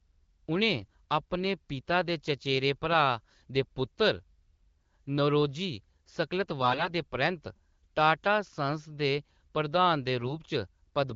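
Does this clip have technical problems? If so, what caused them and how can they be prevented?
Yes, there are three short bursts of AMR bit errors, at 0.78 to 0.94 s, 6.62 to 6.90 s and 10.20 to 10.38 s. Around a few percent of the weakly protected bits got flipped, so excitation pulses and fine pitch, gain and spectral values land wrong, and the speech goes briefly hoarse and gargly while keeping roughly its level. Around those bursts the wideband coding sounds clean. A stronger radio link or better channel coding on the less protected bit classes would prevent it.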